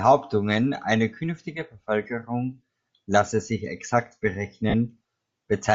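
Throughout the recording, the speech carries plainly audible damage that points to Bluetooth LC3 compression as the likely cause. A transform codec of this kind, working at a rate that fits around 32 kbps with 10 ms frames, discards much of the upper spectrum and replaces it with synthetic noise. The result is a breathy, grainy edge on the speech, with the high end sounding hissy and artificial rather than clear.

At 4.70 s, just after "lasse sich exakt", lost LE Audio frames leave a 40 ms hole, which fits four missing 10 ms frames. Rather than going silent, the decoder keeps replaying the last spectrum it received with randomised phase, so for that short stretch the speech turns into a brief noisy smear before the normal signal resumes at 4.74 s.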